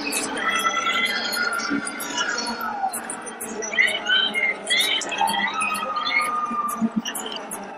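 The whole recording has a watery, swirly quality with dulled treble and smeared attacks, plainly audible, likely from MP3 compression at a bitrate around 64 kbps. At 7.36 s the sound jumps ahead with a brief smeared blip. This is compressed frames skipped: about four 26.1 ms frames, roughly a tenth of a second, never play.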